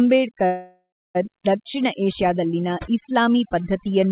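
Overdone noise removal runs through the whole speech clip. Bands near the noise estimate are pushed far down. Quiet parts of the voice vanish with them. The background sits near silence with twinkling specks.

From 0.46 s to 1.17 s there is a call audio freeze. The last sound carries on as a fading buzz or hiss, then about 310 ms of silence. Delayed packets likely emptied the jitter buffer. Speech resumes at "ದಕ್ಷಿಣ ಏಷ್ಯಾದಲ್ಲಿನ ಇಸ್ಲಾಮೀ" with nothing lost, just a 688 ms gap. The call path's band limit leaves nothing above 4 kHz.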